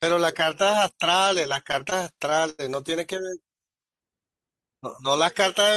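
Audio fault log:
1.67–2.61 s, repeated stalls (stutter): the sound drags and hiccups nine times, with the longest hold about 91 ms. Packets arrived late, the jitter buffer kept running dry, and the receiver stretched the last sound to fill 194 ms, about a fifth of this span. Nothing is lost.
3.65–3.91 s, jitter buffer slow-down: the sound briefly runs at 88% speed with unchanged pitch, drawn out by 38 ms. The buffer was low or had just raised its target delay, so the receiver repeated single pitch periods to rebuild its reserve before playback resumed its normal rate.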